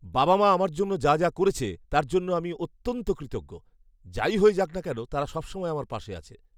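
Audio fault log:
No audible technical faults in this speech recording.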